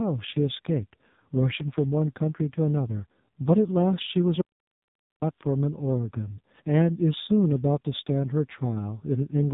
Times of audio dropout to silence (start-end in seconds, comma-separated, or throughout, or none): 4.42-5.21